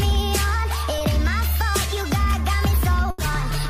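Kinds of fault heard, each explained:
short concealed packet loss: about 20 ms of audio reached the decoder too late at 0.98 s, so the receiver extended the preceding sound across the hole, leaving a brief smear.
burst of packet loss: roughly 80 ms of consecutive audio was lost from 3.10 to 3.19 s. The receiver continued the last sound and faded it down, then resumed with that stretch missing.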